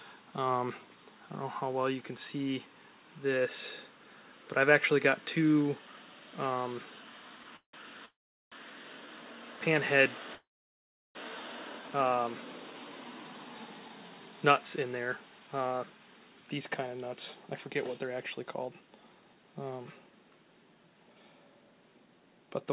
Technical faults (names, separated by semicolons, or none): call audio freeze; jitter buffer slow-down; jitter buffer speed-up